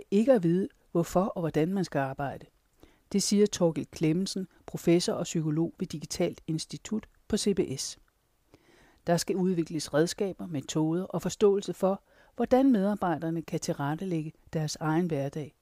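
Nothing in this speech recording stands out as a technical fault, so there's nothing to point to at any moment along the way.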